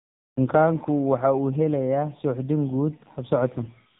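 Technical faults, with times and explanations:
Throughout, AMR narrowband mobile codec: the speech is cut off sharply above about 3.8 kHz and carries a heavy buzzy, synthetic texture. This comes from rebuilding the voice from a vocal-tract model driven by sparse pulses in short subframes, and the coarseness fits a low AMR-NB mode near 6.7 kbps. Simple band-limiting would only dull the sound. The rough, artificial timbre is what marks this as low-rate speech coding.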